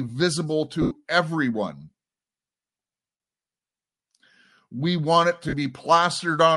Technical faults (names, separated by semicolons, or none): Bluetooth LC3 compression; lost LE Audio frames